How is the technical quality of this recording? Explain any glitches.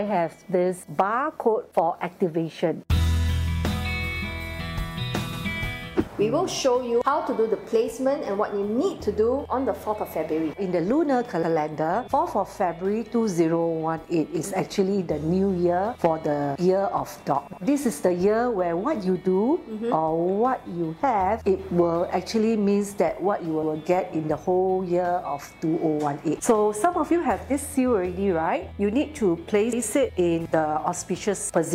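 The recording has a recurring glitch: a short stutter at 5.33, 11.43, 17.53 and 29.73 seconds, where about 100 ms of sound plays twice. This is overlapping chunks. The audio was handled in roughly 6-second blocks, each starting before the previous one ended, so the overlap repeats at every join.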